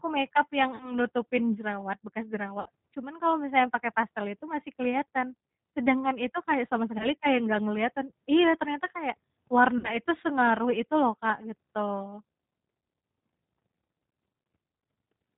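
The whole clip carries plainly audible G.729 codec damage. The speech sounds rough and synthetic, with nothing above 4 kHz. This fits an 8 kbit/s low-rate speech coder.

VoIP packet loss concealed by the speech codec occurs four times. The decoder stretches its last pitch and filter, so each gap turns into a buzzy tone or coloured noise that fades. From 0.76 to 0.96 s, 40 ms is lost, just before "nutupin jerawat bekas". From 2.60 to 2.69 s, 60 ms is lost. From 6.98 to 7.09 s, 20 ms is lost, between "itu kayak sama" and "kayak nggak kelihatan iya". From 9.78 to 9.95 s, 60 ms is lost, between "kelihatan iya ternyata kayak" and "sengaruh itu loh".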